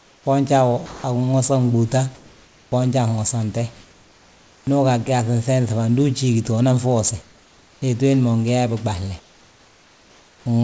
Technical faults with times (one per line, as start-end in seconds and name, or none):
0.00-0.26 comfort noise in place of the background
0.86-1.04 sound dropped by the voice detector
2.15-2.72 comfort noise in place of the background
3.74-4.67 comfort noise in place of the background
7.22-7.82 comfort noise in place of the background
9.20-10.46 comfort noise in place of the background